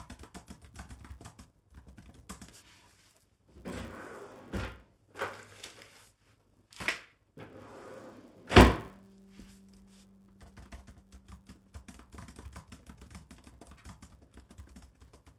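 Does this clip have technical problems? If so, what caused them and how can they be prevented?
Yes. Throughout, a filter restarted on every block adds a 100 Hz buzz: each 10 ms block starts from silence with a small transient. Unlike mains hum, it rises and falls with the signal's level. Preserving filter state between blocks prevents it.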